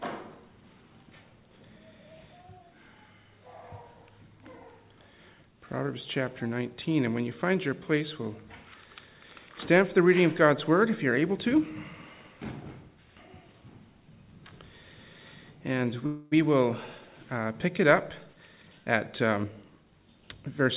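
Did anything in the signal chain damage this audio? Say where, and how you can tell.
Yes. A call audio freeze runs from 16.06 to 16.34 s. For about a quarter of a second the last sound is stretched into a fading buzz or hiss, with no dropout to silence, and then the audio resumes exactly where it stopped. Nothing is lost; a 255 ms gap is inserted instead. The likely cause is at the network stage: delayed packets let the jitter buffer run dry, so the receiver filled the wait until they arrived.

A jitter buffer speed-up follows from 18.26 to 19.92 s, in the buffer and call-processing stage. The audio plays at about 115% speed while its pitch stays the same, so the passage sounds hurried. Holding more audio than it aims for, the receiver trims repeated pitch-period-sized slices, around 0.3 s in total, to bring its delay back down. Throughout, the G.711 mu-law path limits the band to 4 kHz, which fits a 64 kbps call codec.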